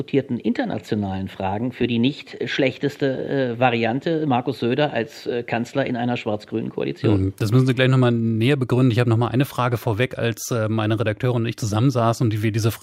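No technical faults can be heard anywhere in this clip.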